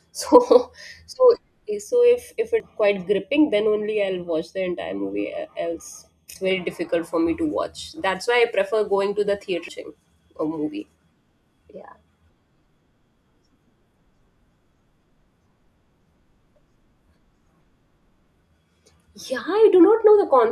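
From 1.83 s to 6.51 s, one channel of the speech runs late by a fraction of a millisecond, and the two are summed to mono, giving channel delay (comb filtering). Energy shared by both channels cancels at regularly spaced frequencies, the first around 1.5 kHz, so the voice turns hollow and phasey through this stretch, with fixed notches carved into its upper range.

Overlapping that passage, at 2.60 s and again at 6.36 s, and once more at 9.68 s after the channels have come back together, there is damaged data in a compressed stream. Corrupted bytes make the decoder misread the frame, lose sync and hunt for the next valid header. Each point is heard as a chirp, squawk, click or short hole in the speech.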